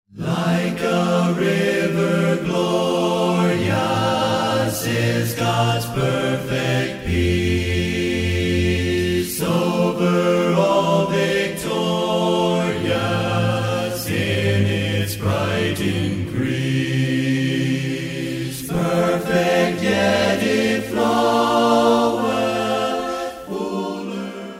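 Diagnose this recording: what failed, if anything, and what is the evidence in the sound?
Nothing failed, and the sound gives no evidence of a fault at any stage.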